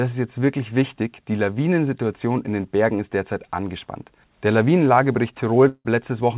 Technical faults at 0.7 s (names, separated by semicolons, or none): none